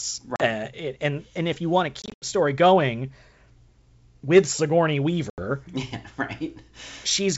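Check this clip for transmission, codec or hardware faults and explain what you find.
The clip has one kind of fault, packet loss on an ADPCM call, at 0.36–0.41 s (40 ms lost), 2.02–2.26 s (140 ms lost in scattered gaps, longest 80 ms) and 5.30–5.44 s (80 ms). The gaps are hard-edged silences. Afterwards, unlike a simple dropout, the speech resumes slightly distorted. This happens because the decoder's adaptive predictor and step size have drifted from the sender's, and it settles within tens of milliseconds. The wideband G.722 sound is clear up to 7 kHz.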